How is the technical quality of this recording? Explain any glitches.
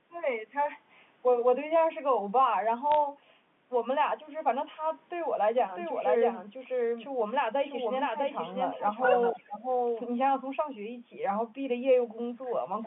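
The recording has four glitches, heard over a G.711 A-law telephone path that keeps the sound within roughly 150 Hz to 3.5 kHz.

Bit errors on a digital phone line, 2.92 to 2.95 s: a brief cluster of flipped bits, at a low error rate, corrupts individual samples. Where a sign or high-order bit is hit, the sample jumps sharply, producing quick ticks and a short crackle over the sound.

Doubled audio track, 5.58 to 10.04 s: a second full-band copy of the audio sits about 0.7 s behind the original and about 5 dB quieter. It has no reverberant tail and starts and stops abruptly. The likely cause is a second, slower capture path or an edit that left two offset copies.

Echo leak, 9.31 to 9.46 s: a faint copy of the speech returns 245 ms late, about 20 dB below the main level, as a short scrap. This is likely an echo canceller on a loudspeaker end failing to remove everything its microphone picked up, so the residue was sent back down the line.

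Speech suppressed in double talk, 9.31 to 9.64 s: the speech dips by up to about 20 dB for roughly 0.3 s. The likely cause is an echo canceller that could not tell its own talker from the returning echo and turned both down.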